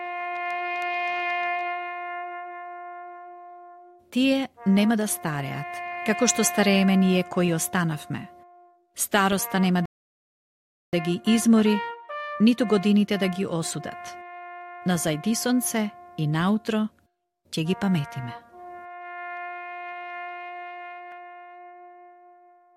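At 9.86 s the sound cuts to silence. It resumes at 10.93 s, exactly where it stopped. This is a rebuffering stall. The player ran out of downloaded audio and waited for more. Nothing is missing, but about 1.07 s of dead air is added.

At 21.12 s there is a brief click. This is a repeated buffer. New audio arrived late, so the last 2.67 ms was played twice with a hard join. That length fits a 128-sample buffer. It is too short to hear as a stutter.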